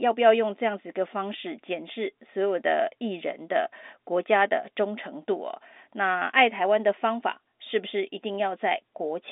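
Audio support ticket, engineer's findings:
No faults found on listening to the speech. The audio sits in the telephone band, roughly 250 Hz to 3.6 kHz, as expected from G.711 A-law coding at 64 kbps, with at most a faint trace of its coding noise.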